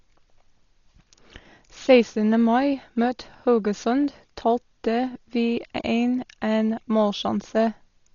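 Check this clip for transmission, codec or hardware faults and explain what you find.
One codec fault runs through the whole of this speech clip: heavy damage that sounds like Dolby Digital compression, likely the cause. Nothing is heard above 7 kHz, so the voice is dull, and tones carry a rough, fluttering noise. That points to a very low bitrate, around 32 kbps, where the encoder narrows the band and leaves many frequency lines without detail, so the decoder fills them with noise. A simple low-pass filter would also dull the sound but would not add that noisy flutter.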